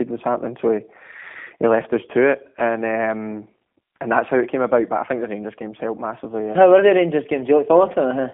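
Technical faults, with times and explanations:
Throughout, G.729 codec: speech sounds rough and synthetic with nothing above 3.7 kHz, which fits an 8 kbit/s coder rebuilding each 10 ms frame from a filter, pitch and pulses.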